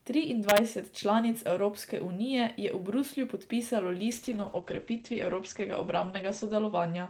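From 0.49 to 0.58 s, the loudest speech peaks crack violently. This is integer overflow. The signal was driven about 2 dB past the largest value the integer format can hold. Instead of being held at the limit, each sample that went over wrapped around to the opposite sign. The waveform jumps across its whole range in a single step. The result is a harsh, splintering snap, far sharper than ordinary clipping.

At 4.13 s a call bitrate drop sets in and lasts to the end. The network's bandwidth estimate fell, so the encoder was told to spend far fewer bits, going from 40 kbps down to 11 kbps. It sits at that lowest rate for 2.42 s. With so few bits, Opus codes the speech coarsely and narrows its audio band from 20 kHz to 8 kHz. The speech turns rough and watery, and the top end sounds dull and muffled.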